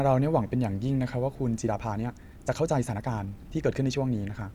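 Speech with a time-stretched section from 1.61 s to the end, running 1.39 times faster at unchanged pitch, sounding rushed, likely from pitch-preserving software speed-up; the spectrogram shows compressed syllables with harmonics at unchanged frequencies.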